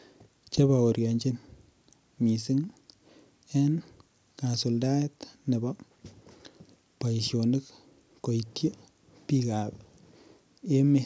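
Nothing stood out on listening to this speech, which carries the ordinary sound of a call's microphone processing with its content ending at about 8 kHz.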